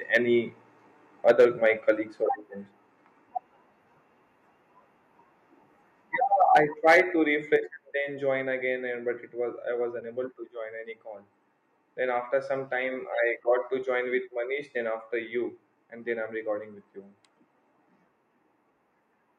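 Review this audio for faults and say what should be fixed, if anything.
Microphone overload at 0.14 s, 1.28–1.45 s, 6.41–6.6 s and 6.87–7.0 s: peaks are squared off, by about 3 to 6 dB, likely from excessive input gain. This gives a crackling harshness, unlike a frame loss's clean gap. Setting the input gain lower, with headroom, prevents this.

Microphone volume stepped down at 1.31 s (just before "my colleagues or friends"), 2.31 s (after "my colleagues or"), 6.57 s and 7.56 s (before "then join again and"): level drops by about 2 to 4 dB in one step, likely automatic gain control reacting to the clipping. Turning off automatic microphone adjustment and fixing the gain manually prevents this.

AAC frame loss with muting at 10.01 s and 13.44 s: a 10 ms stretch fades out and back in as the decoder zeroes the lost frame. It is a brief dip, unlike clipping's distortion. Stronger network protection or packet redundancy prevents this.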